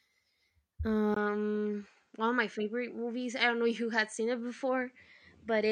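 At 1.14 s the speech drops out for a brief 20 ms gap. From then to the end it sounds narrower and duller, with nothing above 8.9 kHz and a faint new noise floor far beneath the signal, while loudness stays roughly the same. The likely cause is the input switched to a poorer device mid-recording.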